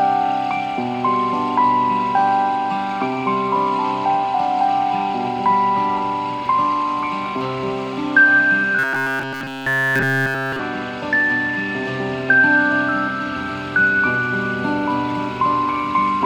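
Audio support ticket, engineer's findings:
Robotic sound from repeated short buffers, 8.79 to 10.6 s. Rigid metallic buzz at 134 Hz, and the stretch is entirely repeats. Likely a starved playback buffer looping its last ~7.5 ms chunk while fresh audio gets skipped, hence that fixed pitch.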